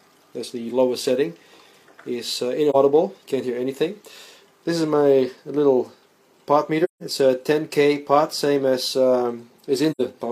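At 2.70 to 2.76 s, 6.84 to 7.03 s and 9.91 to 10.01 s the sound fades into silence and back. This is AAC frame loss with muting. The decoder zeroed the missing spectrum, and the overlapping windows soften each edge. The gaps fit roughly one, four and two lost frames of about 43 ms each. On a spectrogram each appears as a full-band vertical blank with blurred sides, and the waveform tapers to flat rather than cutting off abruptly.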